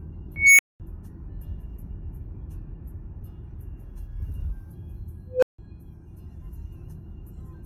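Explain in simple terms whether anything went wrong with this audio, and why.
Two bursts come from an unstable filter. At 0.36 s a high squeal near 2 kHz swells over about 0.23 s, clips, then drops into a 0.21 s silence. At 5.29 s a lower tone near 500 Hz grows over 0.13 s before a 0.16 s silence. Bad filter settings let its output grow until the numbers overflow.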